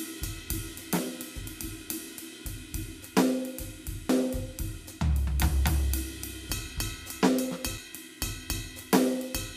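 At 4.09 s a CD skip occurs: the laser jumps to another spiral turn, so the music ticks and lurches to another point, showing a tiny waveform gap and a vertical spectrogram line.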